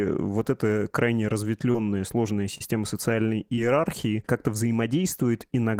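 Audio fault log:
1.71–1.76 s, 2.58–2.69 s, 3.56–3.59 s: short concealed packet loss. Each time about 20 ms of speech arrived too late to decode, and the receiver bridged the gap by extending the preceding sound for roughly 16–25 ms before blending back in. This leaves three brief smears or wobbles.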